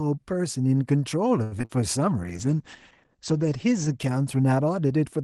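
From 1.43 to 1.81 s, repeated packet loss leaves four gaps, the longest about 83 ms. Half that stretch is concealment extending earlier sound, so the speech turns choppy and robotic. From 2.24 s to 5.21 s, a call bitrate drop from 32 to 11 kbps narrows Opus bandwidth from 12 kHz to 8 kHz. The speech sounds coarser and muffled, bottoming out for about 1.2 s.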